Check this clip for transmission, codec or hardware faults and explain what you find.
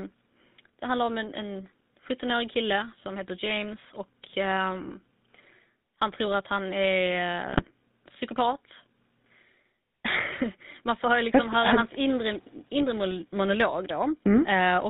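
The whole clip has gone through the GSM full-rate codec, and there are four short bursts of GSM bit errors.

The GSM full-rate codec runs from start to finish, and the damage is plain. It rebuilds the voice from a vocal-tract model driven by sparse pulses and drops everything above 4 kHz, so the speech sounds buzzy, gravelly and dull.

GSM bit errors land at 0.56 to 0.74 s, just before "det handlar om en", then at 3.43 to 3.47 s, 7.48 to 7.70 s and 12.81 to 12.85 s. Corrupted filter, pitch or gain values throw frames off, and you hear squawks, pops and gargling.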